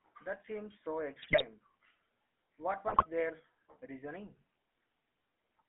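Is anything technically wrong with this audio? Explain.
Yes. Throughout, the speech carries GSM full-rate codec damage. The codec rebuilds the voice from a vocal-tract filter excited by regularly spaced pulses, with the band held to about 250 Hz to 3.4 kHz, which fits a 13 kbps phone link. The result is a plainly audible buzzy, gravelly roughness. Unlike plain band-limiting, the grit sits inside the voice itself.

GSM bit errors strike from 1.22 to 1.44 s, just after "seems so", and from 2.88 to 3.06 s, just before "their reasoning". Corrupted filter, pitch and gain values reach the decoder, so the voice bursts into squawks, pops and gargling with sudden level jumps. Dropouts or packet loss would go silent or repeat instead.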